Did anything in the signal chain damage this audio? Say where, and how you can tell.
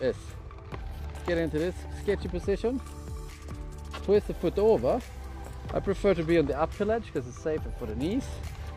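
No, nothing in the signal chain has damaged this audio. Every stage from capture through to playback leaves the sound as it was recorded.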